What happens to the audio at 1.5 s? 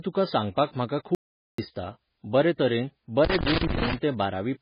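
At 1.5 s the clip is inside an audio dropout to silence running from 1.15 to 1.58 s, about 0.43 s, starting right after "तुका सांगपाक म्हाका". The input was likely lost for that stretch while recording carried on writing silence, so the speech cuts off mid-flow and returns abruptly. Unlike a natural pause or a noise gate, the gap holds no room tone at all, and whatever was said during it is gone.

Around that moment, and across the whole clip, the speech also carries heavy damage from MP3 compression. Nothing is present above 5.1 kHz, and the sound is watery and swirly, with weak detail flickering in and out and consonant attacks smeared. That fits a very low bitrate of around 16 kbps, likely starving the encoder of bits. The shifting, swirly artefacts are what distinguish this from a simple low-pass filter, which would only dull the treble.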